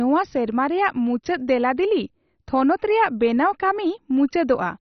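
Throughout the speech, the sound is dull and gurgling, with a granular roughness, consistent with heavy MP2 compression, likely at a very low bitrate around 32 kbps. Starved of bits, upper sub-bands are dropped and the rest coarsely quantised; a spectrogram shows nothing above 6.1 kHz, with flickering blocky bands below.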